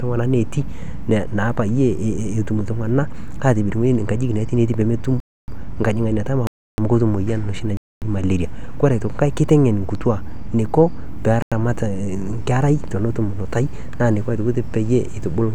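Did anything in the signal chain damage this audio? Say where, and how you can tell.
Yes, at the driver or buffer stage: the speech drops into blocks of digital silence at 5.20–5.48 s, 6.47–6.78 s, 7.77–8.02 s (just before "malaria ore enkai") and 11.42–11.52 s. These are gaps of about 0.25 to 0.31 s, plus a shorter one of 93 ms that fits a 4096-sample buffer left unfilled. On the waveform each gap is a near-flat line with hard vertical edges. On a spectrogram it is an empty column.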